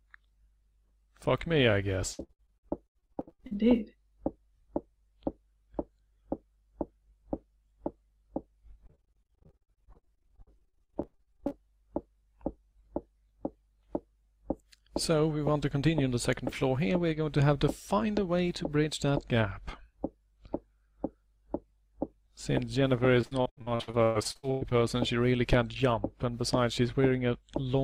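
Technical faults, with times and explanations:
2.13–3.53 s, 8.87–11.61 s and 23.21–24.73 s: repeated packet loss (robotic sound). Packets kept going missing or arriving late, and each hole, up to 115 ms, was patched by stretching the last sound. With roughly 38 to 48% of each stretch concealed, the audio turns choppy, with pieces missing.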